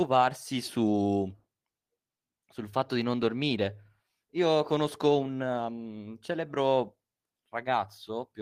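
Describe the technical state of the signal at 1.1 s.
The signal is intact at 1.1 s, with no audible fault at that moment.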